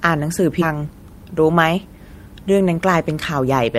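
At 0.61 s a skip ahead drops roughly 0.7 s of speech and joins the two sides directly, with no silent gap as a dropout would leave. From 0.73 to 1.86 s, jitter buffer speed-up trims short pitch-period pieces, running speech about 9% faster at unchanged pitch, unlike resampling, and removing about a tenth of a second.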